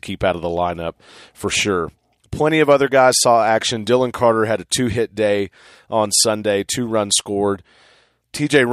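No technical faults occur at any point in this speech recording.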